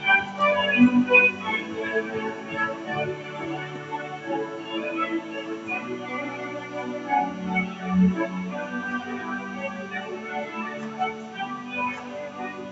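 A speech-tuned noise suppressor left active treats sustained tones and ambience as noise, so throughout the sound, held parts and tails sink by about 10 dB while attacks pass, causing pumping and thinning, all within the call path's 8 kHz bandwidth.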